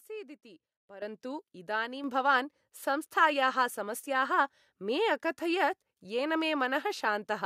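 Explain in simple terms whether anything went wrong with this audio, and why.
Something did go wrong: a microphone volume stepped up fault, twice. At 1.02 s, just before "इदानीं भवान् संस्थायाः", the whole sound suddenly gets much louder, and at 2.04 s, before "भवान् संस्थायाः", it jumps again by a smaller amount. The call software judged the microphone too quiet and turned its input up. Unlike a talker simply raising their voice, the background room sound jumps up at the same instant, in one abrupt step.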